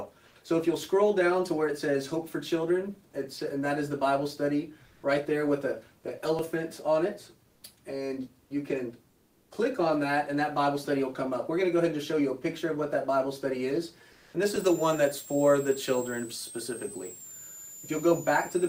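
At 0.27–0.35, 4.87–5.03, 7.50–7.62 and 9.10–9.50 s, comfort noise replaces the background: flat, featureless hiss up to about 3 dB quieter, likely from discontinuous transmission during pauses. At 6.39 s a dropped buffer, likely from an overrun, joins the audio straight across a gap of around 10 ms, giving a small skip. The same comfort noise returns at 14.14–14.34 s at an unchanged level. From 14.46 s to the end, a switching supply whistle sits roughly 15 dB under the signal, wandering between 6.98 and 8.75 kHz. Another dropped buffer skips the audio ahead at 14.56 s.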